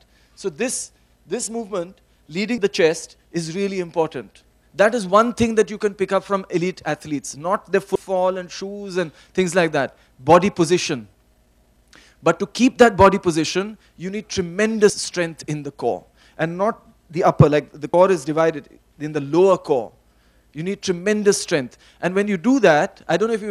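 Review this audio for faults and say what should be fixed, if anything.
Compressed frames skipped: the decoder dropped whole frames at 2.58, 7.95, 14.90 and 17.94 s, either because they were missing or rejected as damaged. Each time the sound jumps ahead, by about 150, 150, 100 and 70 ms, which fits a few 32 ms frames lost at each point, leaving an abrupt join. To prevent this, check the file's integrity after transfer and re-encode from an intact source.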